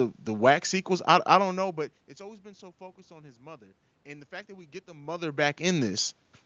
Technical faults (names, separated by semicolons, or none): none